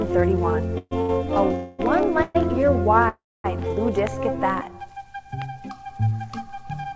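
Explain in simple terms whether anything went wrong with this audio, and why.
A few things went wrong, all timing hiccups on the call path. There are four call audio freezes, at 0.78 to 0.93 s, 1.55 to 1.81 s, 2.23 to 2.37 s and 3.09 to 3.46 s. The sound stops moving forward and trails off as a fading buzz, then picks up exactly where it left off. The 0.78 s freeze ends in a brief silence, and the 3.09 s one, the longest at about a third of a second, falls silent for roughly a quarter second. These are likely from packets arriving late so the buffer ran dry.

There's also a short stall from a late packet at 1.01 to 1.11 s. One packet didn't show up on time, so the sound just before it gets stretched out for about 80 ms, then carries on from the same spot. Nothing's lost; it just lingers too long. The call codec also leaves nothing above 8 kHz, so the top end sounds a bit dull.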